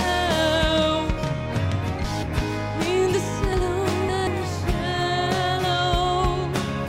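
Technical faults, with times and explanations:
2.04–2.42 s and 3.53–4.27 s, chunks out of order: audio is handled in blocks of about 186 ms, and in each span one block plays later than it should. At 2.04 s it arrives one block late and swaps with its neighbour; at 3.53 s it arrives three blocks late. Nothing is missing, but the sound jumps backward and forward in a jumbled stretch, and each misplaced block creates three hard joins.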